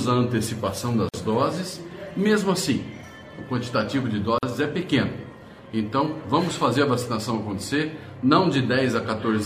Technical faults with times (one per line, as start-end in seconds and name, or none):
1.09-1.14 gap at a join of encoded pieces
4.38-4.43 gap at a join of encoded pieces